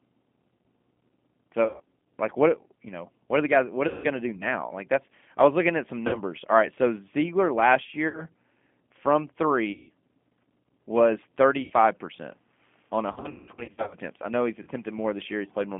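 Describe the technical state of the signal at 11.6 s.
At 11.62 s, between "was thirty" and "percent on", there is VoIP packet loss concealed by the speech codec, lasting until about 11.72 s. Roughly 80 ms of audio is missing, which fits four lost 20 ms packets. The decoder fills the hole by repeating its last pitch period and vocal tract filter at a gain that drops frame by frame, so the speech smears into a fading buzzy tone or coloured noise. Because each frame is predicted from the one before, the sound stays weak or distorted for tens of milliseconds or more after real packets resume.

Underneath, the whole signal carries G.729 codec coloration at 8 kbit/s. It is band-limited to roughly 200 Hz to 3.4 kHz, with nothing audible above that. The codec rebuilds each 10 ms frame from a vocal tract filter, a pitch predictor and a few pulses, which makes the speech plainly rough and synthetic. 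That same predictive structure is what produces the concealment at 11.6 s.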